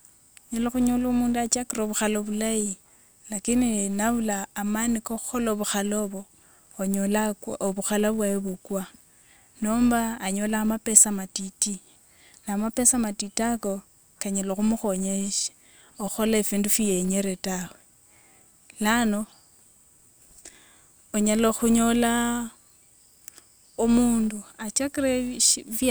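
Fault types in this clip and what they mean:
Filter restarted on every block: the filter drops its state each block, so every 5 ms block starts with a tiny click, giving a 200 Hz buzz that tracks the speech level.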